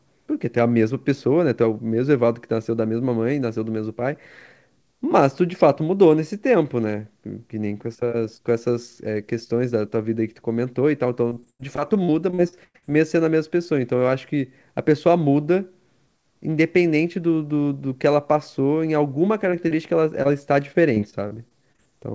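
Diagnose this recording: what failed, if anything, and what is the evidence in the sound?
Repeated packet loss (robotic sound) is a network fault, covered up by the receiver's concealment. From 11.30 to 12.84 s the speech turns choppy, with 13 holes patched by stretching the last sound; the longest is about 98 ms and roughly a third of that stretch is synthetic. A milder run from 20.73 to 21.80 s has 8 shorter holes, none over 23 ms. On a spectrogram, harmonics freeze into flat smeared bands between the clean segments.

Short concealed packet loss also comes from the network. Three isolated holes, at 19.50–19.54, 19.68–19.73 and 20.23–20.27 s, each lose about 20 ms that the decoder bridges by continuing the preceding pitch or noise before blending back. Each is heard as a brief smear or wobble. The spectrogram shows a thin vertical seam in the G.722-coded band, which stops at 8 kHz and fits a 64 kbps call.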